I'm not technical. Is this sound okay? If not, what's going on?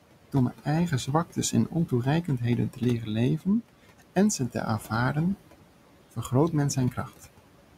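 No. A noise suppressor is working on this speech all the way through, and it leaves noise suppressor artifacts. The background noise of the room drops away in the pauses and comes back under the talking.

There is also speech cut by the noise suppressor, between 1.07 and 1.92 s, 2.24 and 3.47 s, 3.99 and 5.15 s, and 6.91 and 7.25 s. In each stretch, brief bits of the quieter sounds were mistaken for noise and pushed down, so they sound swallowed. Unlike a dropout, the sound never vanishes completely.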